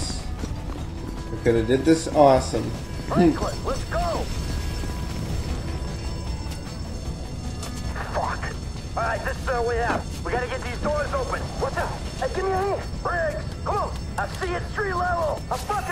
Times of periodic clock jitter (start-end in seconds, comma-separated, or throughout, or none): 6.92-12.64